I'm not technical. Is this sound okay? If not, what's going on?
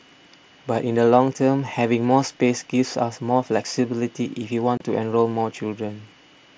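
No. At about 4.77 s the speech drops out for roughly 30 ms, with sharp edges. This is unconcealed Bluetooth headset packet loss. A few voice packets between headset and phone never arrived, and nothing filled the gap. The speech travels over the mSBC headset codec.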